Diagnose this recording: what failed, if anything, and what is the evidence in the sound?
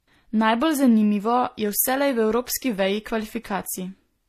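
Transcoding between lossy codecs runs throughout, at the codec stage. Nothing is heard above 14.9 kHz, and two distinct kinds of coding smear overlap. That fits a 24 kbit/s HE-AAC pass likely re-encoded as 64 kbit/s MP3, which spent its bits re-coding the earlier artefacts.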